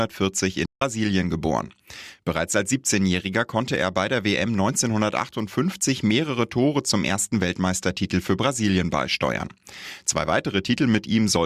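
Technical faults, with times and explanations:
0.66 to 0.82 s, playback stall: The speech stops dead in mid-flow for 157 ms of silence, then carries on. The break is abrupt, not a natural pause. The player likely ran short of data or had its output thread blocked until it recovered.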